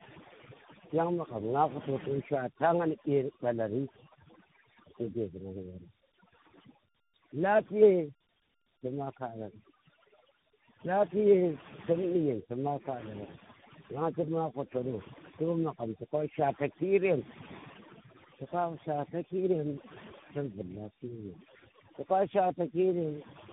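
Overdone noise removal runs through the whole of this speech clip. A noise reducer set far too aggressively has pushed every frequency band that sat close to its noise estimate down to almost nothing, taking the quieter parts of the voice along with the hiss. The background therefore drops to near silence, dotted with twinkling specks. Tandem speech coding is also present from start to finish. The call appears to have been decoded and re-encoded at each network hand-off, passing through three separate speech coders in sequence. The sound points to narrowband AMR at a low rate, twice, with a final CVSD stage, linked by G.711 hops. Each coder had to work on its predecessor's already damaged output, so the roughness, muffling and warble compound, and nothing survives above 3.8 kHz.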